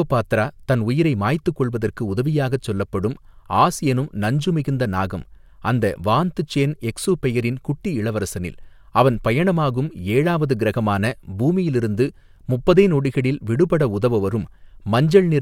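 At 9.57 s, between "எக்சுபெயரின் குட்டி இளவரசனில் அவன்" and "ஏழாவது க்ரகமான பூமியிலிருந்து முப்பதே", a single sharp click cuts into the speech, showing as a thin vertical line across the spectrum. This is likely dropped samples: a fraction of a millisecond of the stream went missing, so the waveform leaps straight from one value to a later one. That step makes the click, while far too little is lost to remove any audible sound.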